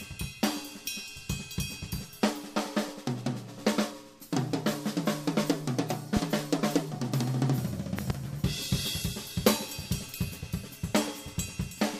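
At 7.99 s, a loud pop breaks in, two sharp thumps in quick succession ending by 8.12 s. They stand roughly 15 dB above the sound, which carries on underneath. The likely cause is a sudden voltage pulse from a plug, switch, static or driver glitch.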